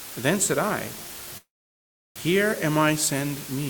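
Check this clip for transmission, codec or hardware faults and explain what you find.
Two faults are audible: a coarse, dithered quantisation hiss that runs the whole way through, and a brief stall in the middle.

Low bit depth with dither, throughout: the signal has been reduced to a resolution that fits about 5 bits, with dither added before the rounding step. Instead of producing harsh, signal-dependent distortion, the rounding error is spread into steady broadband noise. The result is a constant, even hiss sitting only about 15 dB below the sound itself, loud and coarse but free of gritty distortion.

Call audio freeze, 1.37 to 2.18 s: packets were most likely held up in transit, so the receiver's jitter buffer emptied. The receiver filled the wait by extending the last sound for a moment, then fell to near silence for around 0.7 s. When the late packets arrived, playback resumed exactly where it had stopped. 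Nothing is lost, but a pause of about 0.78 s has been inserted, and everything after it runs that much later.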